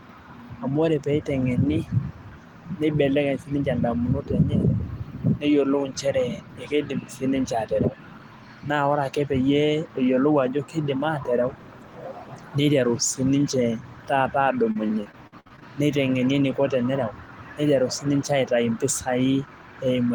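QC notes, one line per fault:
14.71 to 15.63 s, repeated packet loss (robotic sound): ten short gaps, longest 56 ms, patched by extending prior sound, giving choppy speech rather than one clean dropout.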